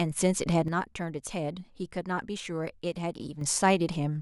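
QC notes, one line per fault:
0.68–3.41 s, sudden gain jump: speech and background noise drop together by about 8 dB and return at once, likely a gain setting applied without a ramp.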